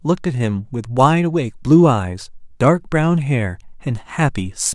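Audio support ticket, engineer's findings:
Nothing stood out on listening to the speech in this clip, so no findings are logged against it.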